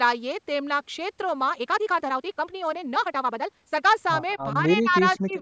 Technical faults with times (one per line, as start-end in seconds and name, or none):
1.45-3.97 time-stretched section
4.29-4.34 echo leak
4.37-5.38 speech suppressed in double talk
5.14-5.33 echo leak